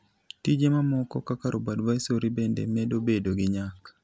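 Nothing technical stands out in this short bit of speech; there's no fault here worth flagging.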